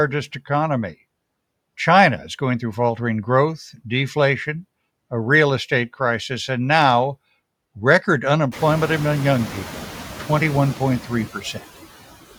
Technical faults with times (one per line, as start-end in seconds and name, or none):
0.00-12.38 noise suppressor artifacts
11.34-11.61 speech cut by the noise suppressor